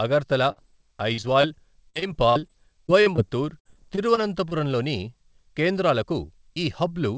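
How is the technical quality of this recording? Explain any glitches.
The recording suffers from repeated packet loss (robotic sound) between about 0.52 and 4.53 s. Seventeen brief gaps, the longest 58 ms, are each filled by extending the preceding sound, so the speech turns choppy, with pieces missing. On a spectrogram these show as smeared, repeated slices with abrupt edges; on the waveform, as looped, stuttering segments. Nothing appears above 8 kHz, which fits a wideband G.722 call path.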